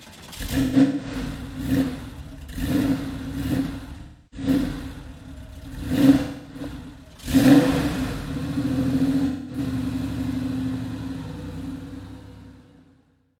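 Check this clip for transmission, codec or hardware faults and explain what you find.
There are four brief dropouts from AAC frame loss with concealment. Smeared, hollow patches appear at 0.61–1.29 s, 4.02–4.48 s, 6.20–6.60 s and 9.26–9.59 s, where the decoder rebuilt missing frames from the last good spectrum.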